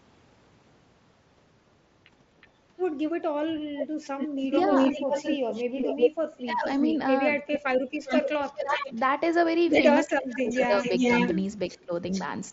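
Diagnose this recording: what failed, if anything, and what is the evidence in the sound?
Echo leak, in call processing at the far end, most likely from a loudspeaker whose echo canceller let its pickup through. A faint copy, about 30 dB down, flickers at 2.41 s with a 370 ms delay. From 3.77 to 9.0 s, and again from 10.32 to 12.23 s, a full-level copy trails the speech by 394 ms and then 423 ms. A spectrogram shows each syllable's harmonic pattern repeated about 0.4 s later. The waveform shows overlapping envelopes where gaps should be.

Speech suppressed in double talk, also call processing, likely the same canceller turning down the local talker while the echo overlapped it. The level drops by about 15 dB at 4.43–4.51 s, 6.43–6.63 s and 8.6–8.95 s. It drops by about 25 dB in pieces totalling roughly 0.7 s between 10.06 and 11.93 s. The waveform shows notched envelopes in those spans.

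Concealed Bluetooth headset packet loss, on the headset radio link. At 4.96 s a single gap of 7.5 ms, consistent with one lost frame, was filled by repeating recent waveform. It is nearly inaudible. A zoomed waveform shows a short stretch copied from just before, and a spectrogram shows a slight discontinuity at the boundary. The mSBC wideband codec on that link passes speech up to 8 kHz with only light grain.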